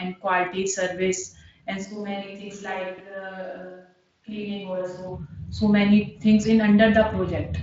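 At 1.85 s the speech abruptly turns roomy and hollow, with thinner bass, a level drop of roughly 10 dB and a noise floor rising to around 35 dB below the speech, likely from a switch to a distant microphone. The waveform shrinks and the spectrogram shows a raised noise wash and weaker low end until the equally sudden return at 5.08 s.

Between 2.94 and 3.00 s, chunks out of order produce a brief jumbled flicker. A 20 ms chunk plays two chunks late, leaving three hard joins that show as vertical discontinuities in the waveform and thin broadband streaks on the spectrogram, reaching up to the Speex band limit near 7.7 kHz.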